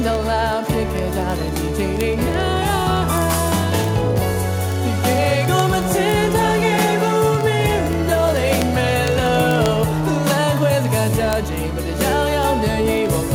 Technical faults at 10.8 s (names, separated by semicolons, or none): word clock ticks